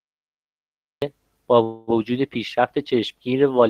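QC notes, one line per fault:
0.00–1.02 s, cut-off start: digital silence runs until 1.02 s, where the speech enters already mid-sound with no attack or fade. The capture began late. Unlike a dropout, nothing precedes the silence, and unlike a soft onset, the first sound is abruptly truncated.
1.63–1.90 s, call audio freeze: the last sound is held as a decaying buzz or hiss for about 240 ms instead of falling silent, and then the speech resumes from where it stopped with nothing skipped. This is likely a jitter buffer running empty while packets were delayed, so everything after it arrives 240 ms later. That sets it apart from packet loss concealment, which covers audio that is actually missing.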